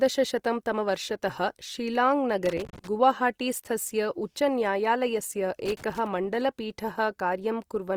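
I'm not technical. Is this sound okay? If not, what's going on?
No. Throughout, the speech sounds rough and grainy, with a clearly noisy texture. This is likely Opus compression, which fills in detail with approximated noise when squeezed hard.

There is also loose connector crackle from 2.46 to 2.87 s and again from 5.66 to 6.07 s: bursts of scratchy noise from a contact briefly breaking and reconnecting.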